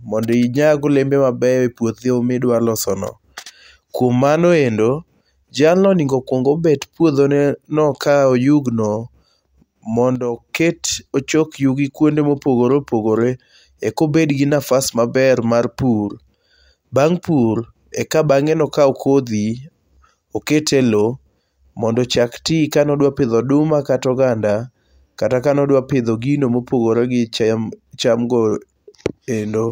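A digital gain setting was likely applied with no ramp, dropping the level by about 6 dB from one sample to the next at 10.16 s. This sudden gain jump lasts until 10.37 s, and both the speech and its background noise drop together, then return abruptly.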